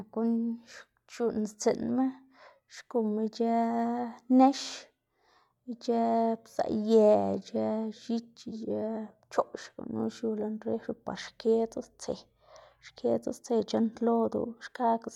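From start to finish there's a faint buzz riding on the speech at 25 Hz, the signature of a resampler restarted on every block. Each 40 ms chunk got converted alone, likely 44.1 to 48 kHz, so every block edge picks up a little error that ticks.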